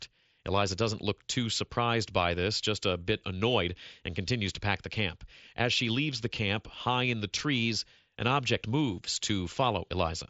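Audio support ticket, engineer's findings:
No faults found in the speech signal; the path runs through the Bluetooth mSBC headset codec, whose wideband audio tops out near 8 kHz and leaves only a light graininess on louder passages.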